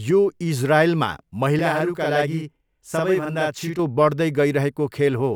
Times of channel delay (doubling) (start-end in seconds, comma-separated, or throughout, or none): 1.59-3.79